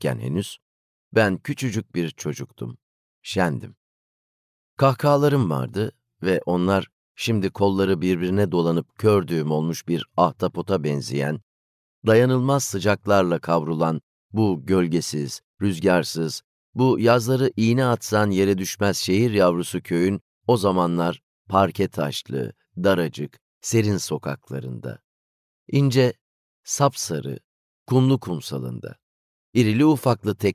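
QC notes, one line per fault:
Nothing here needs flagging; everything sounds as it should the whole way along.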